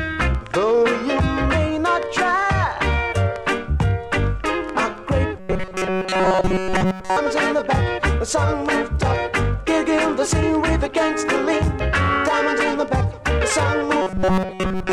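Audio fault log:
5.39–7.17 s and 14.02 s to end, robotic sound from repeated short buffers: a rigid metallic buzz at 188 Hz, total in the first span, mostly in the second. Likely cause: late audio, so a roughly 5.3 ms buffer repeats while real audio is skipped.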